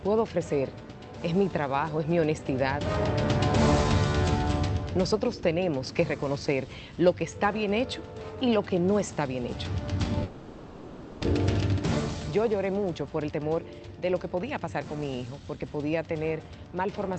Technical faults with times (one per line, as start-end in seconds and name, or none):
10.23-11.25 long network dropout
12.91-15.62 jitter buffer speed-up